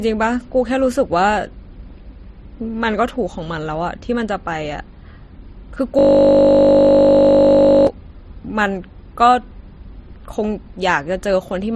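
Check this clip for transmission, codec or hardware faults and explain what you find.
Yes, there are two problems here, one running through the whole clip and one sharp event in the middle.

Transcoding between lossy codecs: the speech has a layered, smeary coding texture with nothing above 13.1 kHz, likely from an AAC stage followed by a low-rate MP3 pass, each adding artefacts.

System hang loop: from 5.99 to 7.87 s, one 20 ms slice repeats over and over. The machine froze while the hardware kept replaying its buffer, producing a steady 50 Hz buzz.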